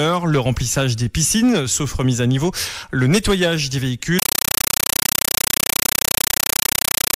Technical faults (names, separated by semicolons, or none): compressed stream played as audio